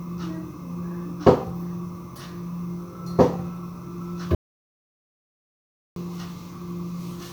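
A recording of sounds with an audio dropout to silence from 4.35 to 5.96 s, about 1.6 s of nothing at all. The sound cuts off mid-flow and returns just as abruptly, and the gap holds plain silence with no room tone or noise floor underneath. That absence of background is what separates it from a natural pause or a noise gate closing. The likely cause is the input being lost briefly while recording continued, and whatever occurred in that span is gone.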